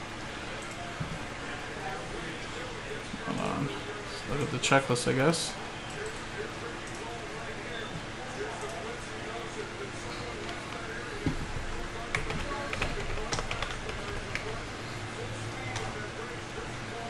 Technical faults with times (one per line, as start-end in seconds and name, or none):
0.00-17.09 resampler restarted on every block